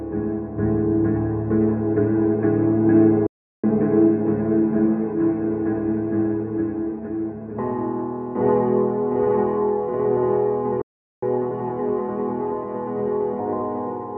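At 3.26 s the sound just drops out for about 370 ms, then carries on, and it happens again at 10.82 s for roughly 410 ms. That's a playback stall, most likely the player running dry of data or its thread getting blocked.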